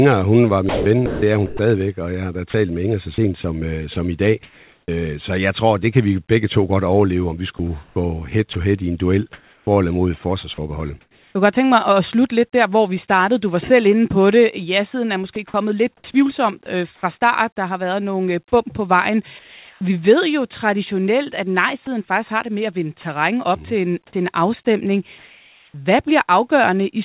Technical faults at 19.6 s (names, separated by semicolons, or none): sound dropped by the voice detector